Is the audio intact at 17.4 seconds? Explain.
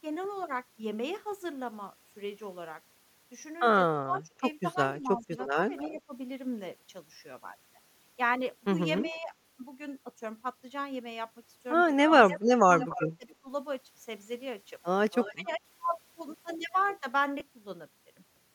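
No. At 17.40 s there is a brief patch of lost LE Audio frames, about 10 ms long, which fits a single missing LC3 frame. The decoder filled the gap by reusing the previous frame's spectrum with randomised signs, so the speech does not cut to silence. Instead it turns into a short, noisy smear where the tonal detail briefly dissolves into hiss. The absence of any silent hole or sharp click is what sets this concealed loss apart from a plain dropout or a buffer glitch.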